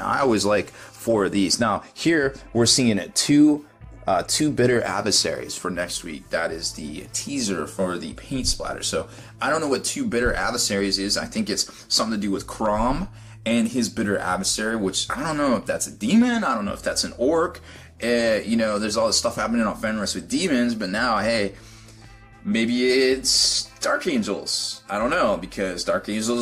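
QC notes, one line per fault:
No technical faults were detected in this audio across its whole duration.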